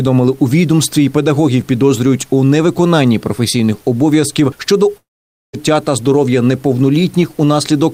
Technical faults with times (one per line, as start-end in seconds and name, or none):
4.97-5.55 long network dropout